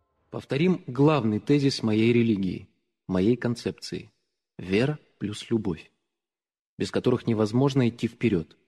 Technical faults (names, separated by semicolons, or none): none